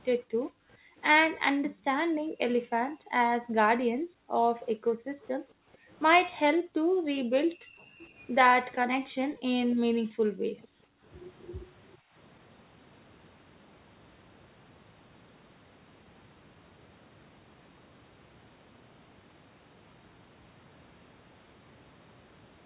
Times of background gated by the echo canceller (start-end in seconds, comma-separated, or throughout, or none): 0.23-0.97, 1.52-5.89, 6.54-8.01, 8.88-11.06, 11.99-12.14